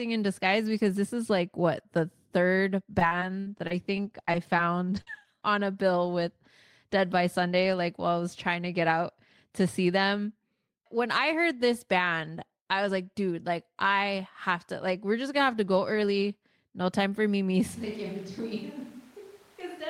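From 2.99 to 4.59 s the stream suffers repeated packet loss, with ten separate gaps (the longest 61 ms) losing about 200 ms of audio. The decoder keeps extending the previous sound over each hole, so this stretch of speech turns choppy and robotic, with fragments missing.

At 4.96 s one lost packet is rebuilt from error correction: the next packet carried a low-bitrate copy, which the decoder played in its place. This leaves no gap, just a brief rough, noisier patch. The same repair recurs at 5.07, 5.20 and 5.24 s.

Between 5.01 and 5.08 s a burst of packet loss removes about 50 ms in a row. The receiver stretches the last sound and fades it, so a short held buzz or fading hiss replaces the missing audio before the speech picks up again further on.

Short concealed packet loss follows at 5.20 s and again from 5.23 to 5.25 s, each losing about 10 ms. The decoder fills these holes from the preceding pitch or shaped noise and blends back, heard as tiny smears or wobbles overlapping the error-corrected patches.

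From 17.76 s to the end there is a switch to a distant microphone, likely because the close microphone dropped out. The speech turns suddenly roomy and hollow, loses bass, falls about 10 dB in level, and room noise rises to roughly 25 dB below the speech.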